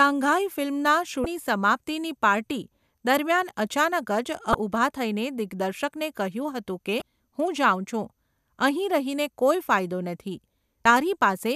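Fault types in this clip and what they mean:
Damaged data in a compressed stream: corrupted bytes make the decoder misread frames and resync, giving brief glitches of about 30 ms at 1.23, 4.51, 6.99 and 10.83 s. A spectrogram shows each as a narrow vertical disruption, and the waveform shows a short, abrupt discontinuity.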